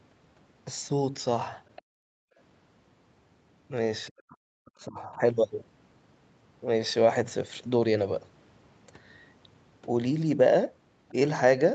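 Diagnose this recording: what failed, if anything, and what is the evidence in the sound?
At 1.76 to 1.82 s and again at 11.09 to 11.13 s, a faint second voice flickers in under the speech, roughly 25 dB and then 35 dB below it. The stage is call processing: this is likely the other side's voice leaking through, where loudspeaker playback reached the microphone and the echo canceller failed to subtract all of it. On a spectrogram these show as brief harmonic smears that do not follow the main talker's pitch.

Right after the first leak, from 1.82 to 2.37 s, the room background collapses by up to about 40 dB for around half a second and then returns. This is background gated by the echo canceller: having detected loudspeaker activity, its suppressor clamped the microphone path hard. The waveform shows the noise floor flattening almost to silence. The spectrogram shows a near-empty vertical band across all frequencies up to the 8 kHz limit of the call path.

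From 4.1 to 5.22 s, the talker's own speech dips and breaks up, losing as much as roughly 40 dB over about a second in total. The likely cause is speech suppressed in double talk: with both ends active, the canceller could not separate near-end speech from echo and attenuated everything. The waveform shows chopped, gated envelope segments. The spectrogram shows harmonics fading and the upper band thinning in patches.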